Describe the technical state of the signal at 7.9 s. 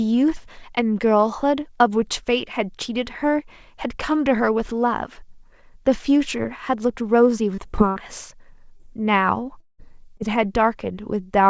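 At 7.9 s there is a burst of packet loss, running from 7.90 to 7.99 s. About 60 ms of consecutive audio never arrived in time. The receiver stretched the last sound and faded it, so a held buzz or dying hiss replaces the missing stretch before the sound resumes.

Just before it, from 7.75 to 7.81 s, a short concealed packet loss drops about 30 ms. The decoder extrapolates the preceding sound to cover the hole and blends back, leaving a brief smear or wobble. The G.722 call path keeps everything below 8 kHz.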